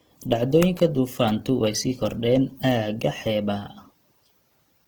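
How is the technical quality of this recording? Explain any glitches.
The recording has plainly audible codec damage from start to finish.

Opus compression runs through the whole clip and is the likely cause of the roughness. The encoder stays in its music-oriented CELT mode at full bandwidth, with content reaching about 20.1 kHz, and the density of the artefacts fits a low rate around 16 kbps. With so few bits, many bands keep their overall energy but are filled with folded or noise-like content instead of real detail, so the speech sounds grainy, hissy and rough rather than muffled or swirly.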